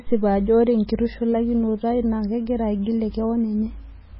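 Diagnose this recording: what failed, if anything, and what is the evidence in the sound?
MP3 compression runs through the whole clip, at the codec stage. Nothing in the speech reaches above 5.5 kHz, so the air and the top of the sibilants are gone, and the sound has a heavy watery, swirling texture where quiet spectral detail flickers in and out between frames. This is likely a starved MP3 encoder, which fits a very low bitrate around 16 kbps. Short of bits, it cuts the treble and discards weaker frequency lines frame by frame.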